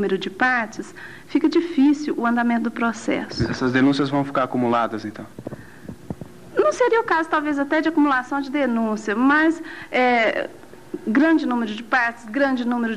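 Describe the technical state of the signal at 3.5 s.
At 3.5 s the signal is intact, with no dropout, distortion, glitch or other fault to be heard at that point.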